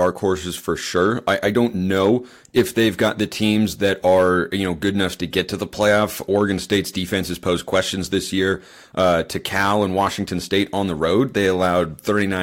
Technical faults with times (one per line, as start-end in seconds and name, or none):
0.00-12.42 hard clipping